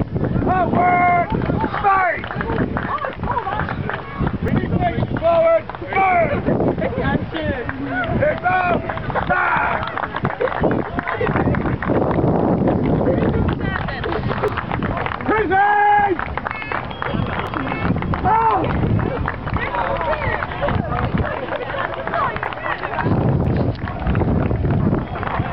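Short skips at 4.48, 14.48, 17.47, 22.45 and 23.45 s come from overlap between stream segments. Roughly 15 ms of real sound is cut at 1 s segment joins, so the waveform jumps ahead. Unlike a dropout, no silent gap is inserted.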